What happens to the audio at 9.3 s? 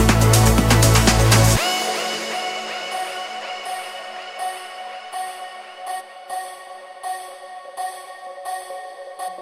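Damaged data in the compressed stream throws the decoder out of sync from 9.27 to 9.29 s, producing a brief chirp or blip.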